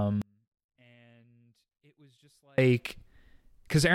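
From 0.22 to 2.58 s, an audio dropout to a faint residue cuts the speech abruptly, leaving only a leak roughly 35 dB down, likely from a lost feed with the path still live.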